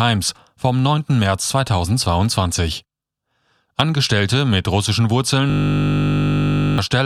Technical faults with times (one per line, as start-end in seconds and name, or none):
5.50-6.78 system hang loop